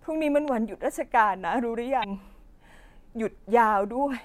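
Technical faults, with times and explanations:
0.48–0.50 s, loud pop: a single sharp pop rises a few decibels above the speech, which continues underneath. It is likely a sudden voltage step from a switch, plug or static. On a waveform it is a tall narrow spike; on a spectrogram it is a thin vertical stripe across all frequencies.
2.00–2.05 s, damaged data in a compressed stream: a short disturbance in the speech. Corrupted bytes made the decoder misread frames and lose sync until it found the next frame header. A spectrogram shows a brief break in the normal speech pattern.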